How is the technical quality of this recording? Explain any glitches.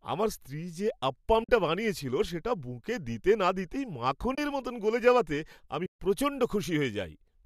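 Three short dropouts break up the speech, each a soft fade to silence and back rather than a hard cut. The underlying coding sounds light, likely from low-delay AAC compression at a moderate bitrate around 64 kbps.

AAC frame loss with muting occurs at 1.44 to 1.49 s (50 ms), 4.35 to 4.38 s (30 ms) and 5.86 to 5.99 s (140 ms). The sound dips out smoothly. Missing frames were replaced with silence, and the overlapping decoder windows blurred each gap's edges. The durations fit runs of roughly 10 ms frames.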